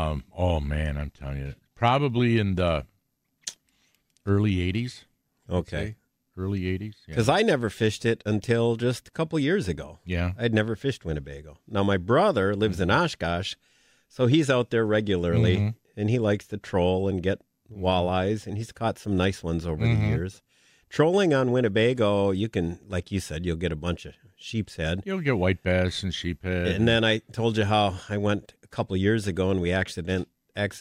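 No technical faults can be heard anywhere in this recording; the signal holds steady throughout, with no interruptions, level jumps or unwanted additions to the sound.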